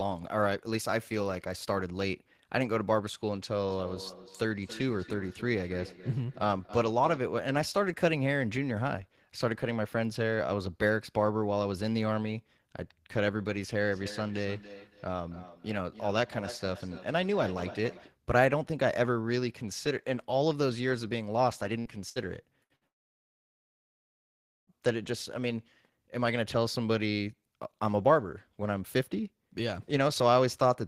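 From 3.52 to 7.31 s and again from 13.81 to 18.18 s, the speech carries a feedback echo between two devices. A second device in the room plays back what this microphone sent, the microphone picks it up again, and neither echo canceller removes sound from the other device. A delayed copy trails each phrase by roughly 0.3 s, peaking about 16 dB below the speech. On a spectrogram, the speech harmonics show up as fainter, evenly offset duplicates.

Between 21.79 and 22.84 s there are four bursts of packet loss: 21.79–21.88, 22.09–22.19, 22.64–22.73 and 22.76–22.84 s. In each burst, about 60 ms of audio never arrived in time. The receiver stretches the last sound into a fading buzz or hiss for roughly 55 to 63 ms, then jumps ahead past the missing 60 ms. The waveform shows short smeared, decaying patches. On the spectrogram these appear as flat horizontal streaks followed by abrupt discontinuities.

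Immediately after, from 22.87 to 24.72 s, the audio drops out for about 1.8 s. The last sound carries on only very briefly before giving way to near-silence, and when the speech returns, the intervening stretch is gone. The likely cause is a long network dropout in which no packets reached the receiver. The waveform shows a flat, empty band, and the spectrogram shows a dark vertical gap with a hard edge at each end.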